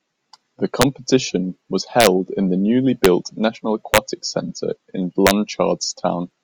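Speech with integer overflow cracks at 0.82 s, 2.00 to 2.07 s (just before "in the newly"), 3.05 s (just after "in the newly"), 3.94 to 3.98 s and 5.27 to 5.31 s. Loud peaks exceeded the integer limit by only about 1 to 2 dB but wrapped to the opposite extreme instead of clipping. On a waveform, the peaks jump straight from one extreme to the opposite; a spectrogram shows sharp broadband vertical streaks at each crack.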